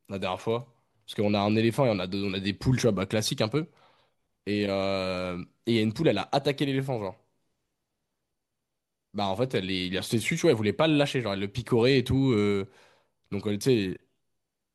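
No technical faults can be heard in this recording.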